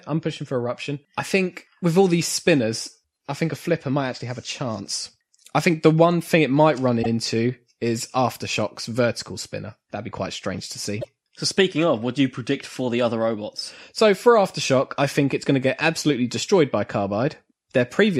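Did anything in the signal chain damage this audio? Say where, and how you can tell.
Yes: repeated frames in the codec or storage stage replayed compressed blocks, causing a 72 ms stutter at 7.02 s and a 24 ms one at 11.01 s.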